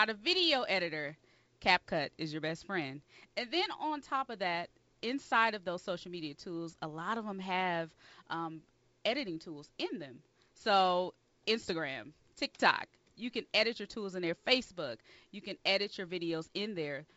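No faults found in this speech; it carries G.722 wideband telephone coding with a light upper-band hiss, in its 56 kbit/s mode, with nothing above 7.7 kHz.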